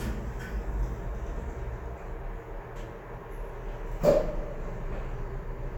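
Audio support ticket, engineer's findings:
No faults found on listening to the recorded sounds. Nothing to escalate; ticket can close.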